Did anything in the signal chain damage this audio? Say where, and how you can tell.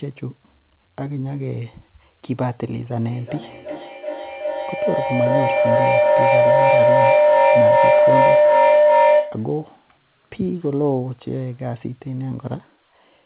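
Yes. A feedback howl runs from 3.09 to 9.58 s. Two devices in the same room closed an acoustic loop through the call. Each trip gained level, so the sound narrowed to a tone around 700 Hz. The loop repeats about every 0.4 s, and the howl peaks about 9 dB above the speech.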